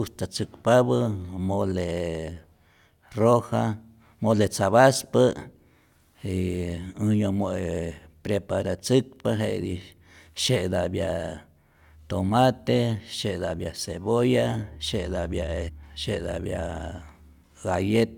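Speech recording with one abrupt discontinuity between 15.68 and 15.70 s, where the sound jumps forward with a small blip, as if a stretch of the talk has been cut out. The cause is likely a stream segment skipped: one chunk of the segmented stream failed to arrive, and the player carried on from the next chunk, so the material it held is simply absent and the join lands without any crossfade.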